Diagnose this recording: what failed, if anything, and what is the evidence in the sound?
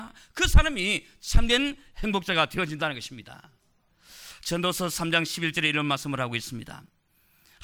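Chunks out of order at the driver or buffer stage: around 6.86 to 6.89 s, a 10 ms chunk lands two chunks late, giving a brief jumbled moment.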